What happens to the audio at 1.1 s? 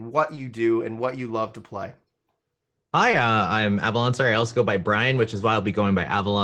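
Nothing goes wrong at 1.1 s: the speech comes through intact, carried by the WebRTC call path with the Opus codec working normally and its high end tapering off around 12 kHz.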